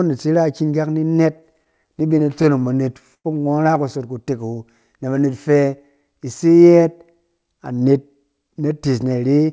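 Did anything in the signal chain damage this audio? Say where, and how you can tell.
Yes. Repeated stalls (stutter) at the network and jitter buffer, 1.08 to 3.26 s after "na iki kak ni": 16 brief stalls, longest 101 ms, where late packets emptied the buffer and the last sound was stretched.

Jitter buffer speed-up in this G.722 call path, 5.25 to 6.27 s before "ise yɛɛt": speech runs 8% fast at unchanged pitch as the buffer drops pitch-period slices, about a tenth of a second in total.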